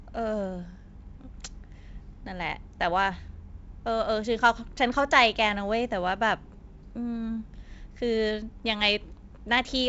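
No technical faults can be heard in the speech, which comes over G.722 wideband telephone coding with nothing above 7.7 kHz.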